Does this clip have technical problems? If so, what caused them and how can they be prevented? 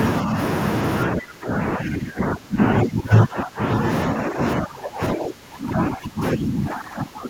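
Yes. The speech dips slightly from 0.23 to 0.37 s, then falls by roughly 20 dB from 1.07 to 3.85 s and from 4.09 s to the end. This is likely speech suppressed in double talk: the echo canceller couldn't separate near-end speech from loudspeaker echo and attenuated both. Better double-talk detection in the canceller, or a headset that removes the loudspeaker echo path, prevents it.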